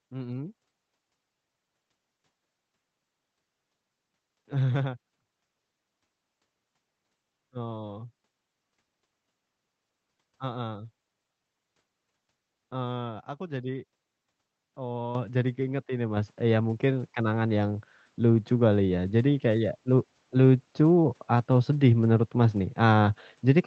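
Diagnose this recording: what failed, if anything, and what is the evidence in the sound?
The microphone volume stepped up twice: call processing raised the device input level by about 8 dB at 15.15 s, before "jadi keinget ini", then about 4 dB at 16.17 s, before "ya mungkin". Background noise jumps with the speech, ruling out a louder talker.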